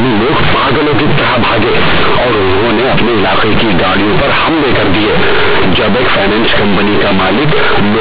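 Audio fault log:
Throughout: companded audio read as linear. The mu-law bytes are played as plain 8-bit samples with no expansion, so every sign flip swings across half the range, quiet speech comes out as loud as peaks, and you get buzzy distortion with heavy noise in the pauses.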